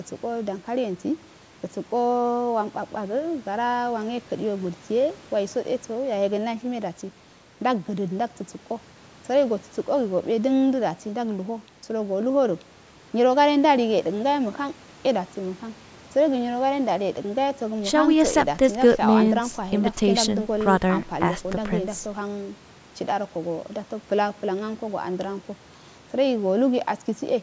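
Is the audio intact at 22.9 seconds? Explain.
Yes, the speech at 22.9 seconds is intact, carrying only the ordinary call microphone processing, which trims the lowest bass and leaves nothing above 8 kHz.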